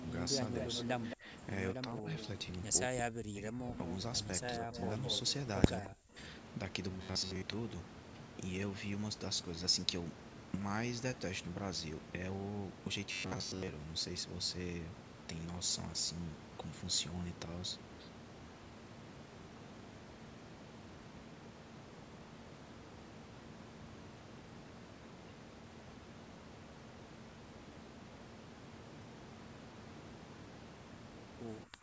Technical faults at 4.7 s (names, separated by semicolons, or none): speech suppressed in double talk; echo leak